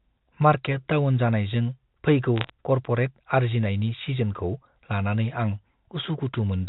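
Bit errors on a digital phone line occur from 2.36 to 2.50 s. Scattered flipped bits, around a few per thousand, each corrupt single samples of the G.711 telephone signal, whose band stops at 4 kHz. Hits on sign or high-order bits produce sharp ticks, heard as a brief crackle over the speech.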